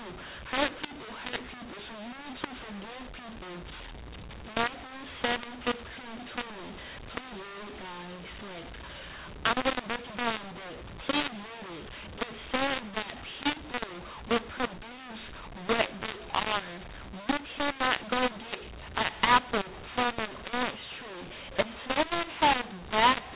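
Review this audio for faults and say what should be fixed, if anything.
The whole recording has a mu-law and A-law mix-up. The speech was coded as A-law and then decoded as mu-law, so every 8-bit code word gets mapped onto the wrong curve. Loud and soft passages come out at the wrong sizes relative to each other, which makes the speech harsh and crunchy, and the near-silent gaps get lifted into a steady hiss. The underlying G.711 coding at 8 kHz is fine, with the usual cut-off around 4 kHz. To prevent it, make sure the decoder reads the companding law from the stream or call setup instead of assuming mu-law.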